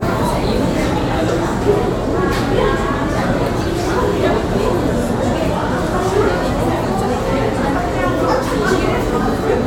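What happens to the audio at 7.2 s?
Nothing goes wrong at 7.2 s; the sound carries on intact through that moment with no dropout, click or distortion.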